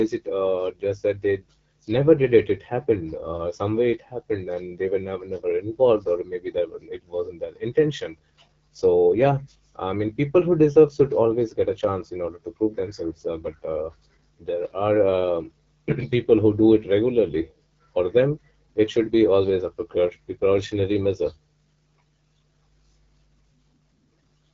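Throughout the clip, the speech has passed through the AMR wideband (HD Voice) codec at a low rate of 8.85 kbit/s, starving its vocal tract model of bits. The result is plainly rough, raspy speech, with nothing above 7.6 kHz.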